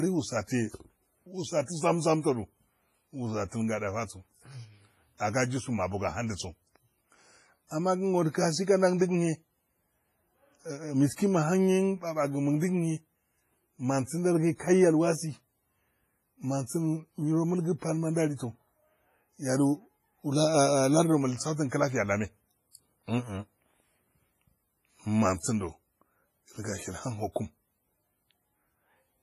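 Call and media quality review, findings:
Washy, ringing speech with hiss breathing with the signal, throughout; nothing above 15.5 kHz. Likely WMA compression at a low bitrate: smear spans tens of ms, unlike packet-loss gaps.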